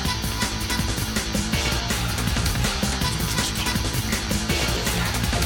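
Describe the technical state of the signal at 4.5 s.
At 4.5 s the signal is intact, with no audible fault at that point.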